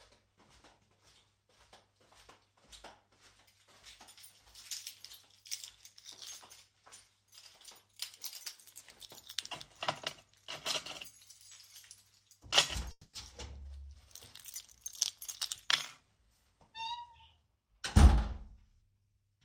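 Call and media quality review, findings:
Call audio freeze, 12.91–13.16 s. Sound stalls, then resumes where it stopped. Probable component: jitter buffer underrun, likely from packets delayed in transit. The receiver stretched the last sound for 220 ms as a fading buzz or hiss, then 30 ms of silence. Nothing lost, but playout now runs 220 ms later. Spectrogram: the last spectral frame smeared horizontally and fading, then a short blank column. Waveform: repeating decaying cycles, flat gap, clean restart.

Jitter buffer speed-up, 15.67–19.02 s. Audio runs about 6% fast and sounds slightly hurried, with pitch unchanged. Probable component: jitter buffer draining surplus depth after the late packets arrive in a burst. Many short pitch-period chunks cut, roughly a fifth of a second in total. Spectrogram: sound events packed closer in time with frequencies unshifted. Waveform: frequent small splice points, no gaps.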